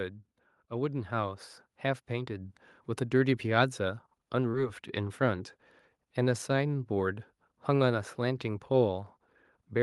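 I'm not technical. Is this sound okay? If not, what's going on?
No. From 0.68 to 3.43 s there is automatic gain rising: the call's level control keeps turning itself up, so the voice and background noise swell together. At about 4.51 to 4.55 s there is a short concealed packet loss: a sliver of audio arrived too late, and the receiver filled the gap by stretching the last sound, leaving a brief smear or wobble.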